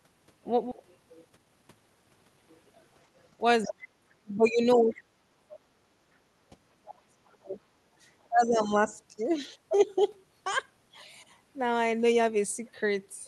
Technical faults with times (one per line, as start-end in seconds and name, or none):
0.71-0.73 skip ahead
0.83-2.37 jitter buffer speed-up
3.63-3.68 other side's voice leaking through
3.65-4.50 speech suppressed in double talk
4.71-4.99 other side's voice leaking through
4.76-5.51 speech suppressed in double talk
5.52-5.57 other side's voice leaking through
6.68-7.59 speech suppressed in double talk
8.28-8.94 speech suppressed in double talk